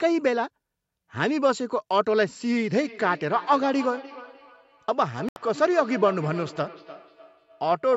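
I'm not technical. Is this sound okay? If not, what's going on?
No. Feedback echo between two devices starts at 2.62 s and lasts to the end: a second device replays the sound and the microphone catches it again, so it repeats every third of a second or so. At 5.29 s the sound drops out for 76 ms, then resumes, likely a Bluetooth stall, where the headphones briefly ran out of audio.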